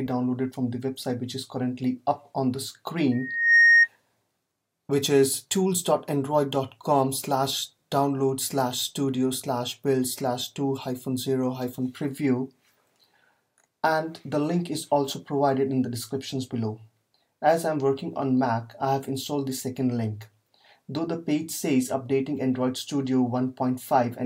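From 3.12 to 3.88 s, loudspeaker feedback squeal: the microphone-loudspeaker loop exceeds unity gain at 1.9 kHz, building within about 0.4 s to roughly 10 dB above the sound.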